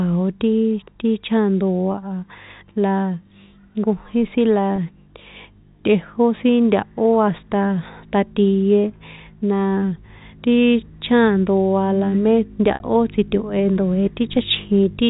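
At 1.92 to 1.94 s, after "jkojín sin la" at 4.76 to 4.78 s, and between "la me" and "tsito̱he ndoe" at 12.74 to 12.80 s, there is packet loss with pitch repetition. The receiver bridges each gap by repeating the last pitch period. The 20 ms gaps sound like a brief buzzy hold, which fits one lost packet. The 60 ms gap holds longer and fades, and points to three packets lost. The telephone band of G.711 coding frames it all.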